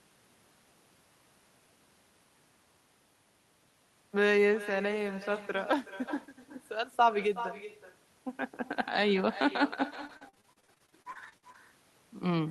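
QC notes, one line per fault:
Throughout: echo with no canceller. Every phrase returns as a fainter copy about 16 dB below the speech and trailing it by about 0.4 s. The far end is playing the call over a loudspeaker, its microphone picks that up, and nothing strips it out, so the sound comes back after the network round trip. It sounds thinner than the original. On a spectrogram each syllable has a dimmer, smeared twin shifted right by roughly 0.4 s. The waveform shows small echo bursts filling what should be pauses.
9.93 to 11.56 s: repeated packet loss (robotic sound). Seventeen separate dropouts land in this 1.6 s stretch, the longest 45 ms, with about 440 ms of audio lost in total. The receiver papers over each hole by extending the last sound it had, about 27 percent of the span in all. Because the holes come so close together, the repeats pile up into a choppy, robot-like stutter with pieces missing. 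On a spectrogram, harmonics freeze into flat, repeated slices with abrupt edges. The waveform shows a jagged envelope of cloned short segments.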